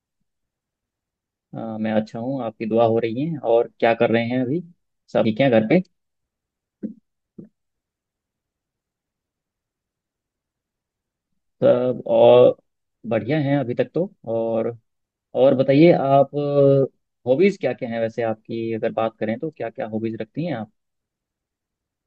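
At 5.25 s and again at 15.05 s, the speech skips abruptly, with roughly a fifth of a second gone and the two sides butted together without silence. The 10-second spacing points to audio missing between chunks, likely lost while the recorder switched buffers.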